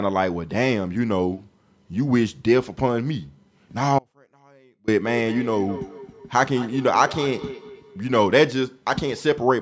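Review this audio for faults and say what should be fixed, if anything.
An audio dropout to a faint residue runs from 3.99 to 4.88 s. The speech cuts out abruptly, leaving only a trace about 35 dB down, likely because the signal was lost while the path after it stayed live. A natural pause wouldn't stop so suddenly. Securing the connection that feeds the capture chain would prevent this.

Feedback echo between two devices appears from 5.01 to 8.19 s. Speech comes back at roughly one-fifth-second intervals, peaking about 15 dB below the original, because a second device in the room replays the call into the microphone. Room reverberation would not repeat at a fixed interval like this. Muting the second device or using headphones on it would prevent this.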